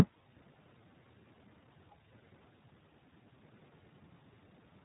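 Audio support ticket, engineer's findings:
Speech path through iLBC codec, 20 ms frames coded independently, fits 15.2 kbps mode. Nothing above 3.9 kHz; plainly audible rough, synthetic texture throughout.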